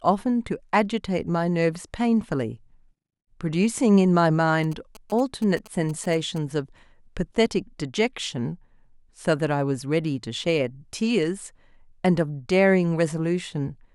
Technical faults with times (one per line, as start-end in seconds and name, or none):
4.64-6.38 GSM signalling bursts